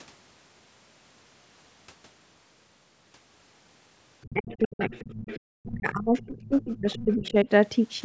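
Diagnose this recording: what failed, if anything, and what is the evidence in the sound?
Speech suppressed in double talk points to the call-processing stage. From 4.25 to 5.48 s and again from 5.65 to 7.48 s, the speech drops in pieces by about 40 dB and about 30 dB, roughly a second each time. On the waveform the envelope collapses in chunks, and on the spectrogram the harmonics fade to gaps. The likely cause is the echo canceller attenuating the near talker while the far side talks.

The other side's voice is leaking through in the same call-processing stage. From 4.51 to 5.4 s and from 6.16 to 7.31 s, a second voice sits about 20 dB and about 25 dB below the speech. On the spectrogram a faint, separate harmonic pattern appears inside those suppressed stretches. The likely cause is loudspeaker echo that the canceller did not fully remove.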